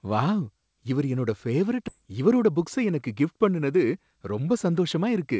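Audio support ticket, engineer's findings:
Skip ahead at 1.88 s, right after "வாவ் இவரு என்னோட பேவரைட்". Playback jumps forward with no silence inserted. Roughly 0.7 s of speech is lost and the two sides are butted together. Probable component is the jitter buffer: it overflowed and discarded queued audio, cutting latency by about the same amount. On the waveform there is an abrupt envelope discontinuity with no flat gap. On the spectrogram, formant tracks break and restart mid-trajectory. The call path's band limit is visible as an empty region above 8 kHz.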